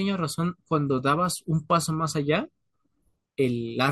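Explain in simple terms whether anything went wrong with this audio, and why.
Nothing went wrong with this recording. The speech comes through as it should, with no dropouts, glitches or distortion to point to.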